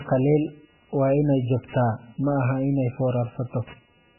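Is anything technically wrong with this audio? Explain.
Yes, there are two problems, and both run the whole length of the speech.

First, computer activity noise sits under everything, pulsing at roughly 200 times a second and roughly 25 dB below the speech. That's the processor, graphics card or mouse shifting the shared ground as their load changes, and the audio circuit picks it up. You hear it as a buzzing, chirping or scratching layer that rises and falls with what the computer is doing, not with the speech.

Second, there's heavy codec damage, likely MP3 compression at a very low bitrate, something in the region of 8 kbps. Nothing survives above 3 kHz, so the top end is simply gone and the speech sounds dull. With so few bits, weak frequency lines get dropped and then flicker on and off between frames, which gives that watery, swirly texture, metallic chirps on the s sounds and smeared attacks.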